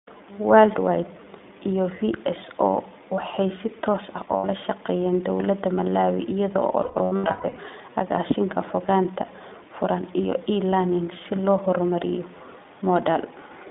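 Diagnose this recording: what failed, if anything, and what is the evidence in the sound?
iLBC codec throughout, at the codec stage: the speech is confined to about 250 Hz to 3.6 kHz and sounds plainly rough and synthetic, which fits 20 ms frames coded independently.

Lost iLBC frames, a network fault: at 4.36–4.46 s, between "waxay si toos ah" and "shaqeeyeen dawladda", and scattered across 6.82–7.59 s in runs up to about 150 ms, the decoder repeats pitch cycles as buzzy held vowels, then recovers almost immediately.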